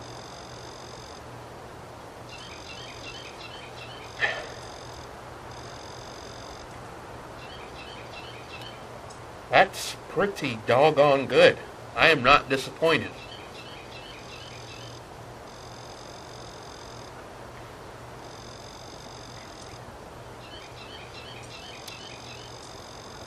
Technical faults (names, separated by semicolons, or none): periodic clock jitter